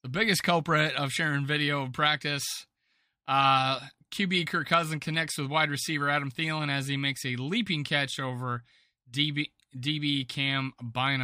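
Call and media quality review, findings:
Clock slip clicks: faint regular ticks in the speech from 0.21 s to 11.07 s, around thirty, roughly every 0.4 s. Single-sample drop/repeat at each slip. Likely two unsynchronised device clocks, error on the order of 70 ppm.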